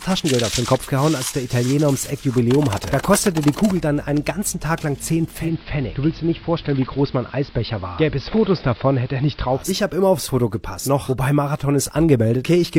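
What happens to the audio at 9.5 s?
Dull, band-limited sound, faint hiss, and about 1 dB lower level. This is digital radio blending to analogue AM, from 5.29 to 9.75 s, each blend taking about a quarter second.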